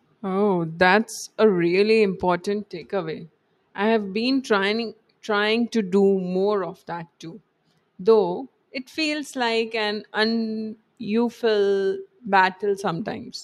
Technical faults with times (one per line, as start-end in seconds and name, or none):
none